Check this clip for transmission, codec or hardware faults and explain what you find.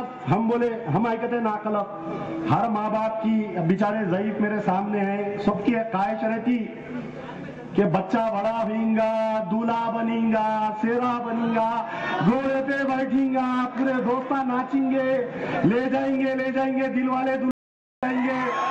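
One fault is present. From 17.51 to 18.03 s there is an audio dropout to silence lasting about 0.52 s. Sound cuts to total silence, without room tone. Likely the input link failed while recording continued writing zeros.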